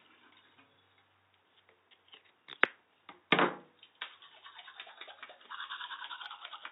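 Nothing stood out on listening to these everyday sounds.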